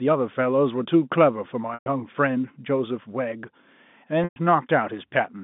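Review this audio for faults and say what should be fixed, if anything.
Packet loss with pitch repetition at 1.74–1.86 s and 4.24–4.36 s: each 120 ms gap, consistent with several lost 20 ms packets, is bridged by repeating the last pitch period. This produces a brief buzzy hold that fades to silence over about 50 ms before the speech cross-fades back. To prevent it, reduce loss on the network path or add forward error correction and a deeper jitter buffer to the G.711 link.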